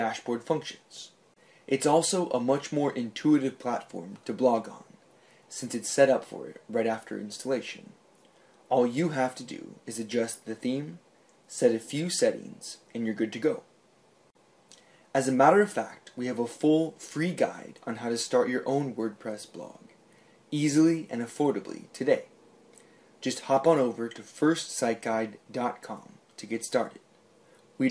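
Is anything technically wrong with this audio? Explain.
No, nothing technically wrong can be heard in this audio; the signal stays steady and intact from its opening moment to its close.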